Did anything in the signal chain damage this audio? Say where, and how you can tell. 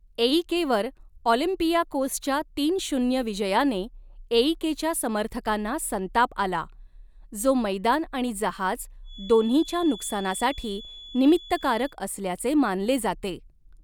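Yes: after "जो मैदान आणि जहाज", from 9.02 to 11.97 s, a feedback whistle sits at 3.4 kHz, around 20 dB down. On a spectrogram it is a thin horizontal line. It is likely a loudspeaker-to-microphone loop held just short of runaway.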